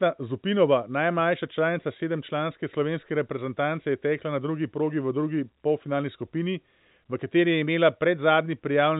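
Nothing in the speech is technically wrong. The telephone path can be heard as G.711 coding, which fits A-law: the band stops at 4 kHz, and a faint, level-following hiss sits far below the speech.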